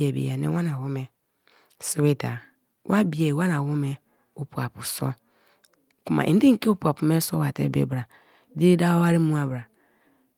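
No technical faults can be heard anywhere in the speech.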